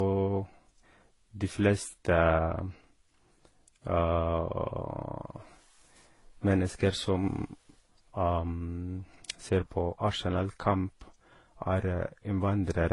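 Right through, the speech has layered, mismatched codec smear and nothing above 11.2 kHz, likely from transcoding between lossy codecs, with an HE-AAC, MP3 and Vorbis chain. From 9.42 s to the end, a channel delay of about one sample, summed to mono, causes comb filtering with its first notch up near 20 kHz, shaving a touch more off the top.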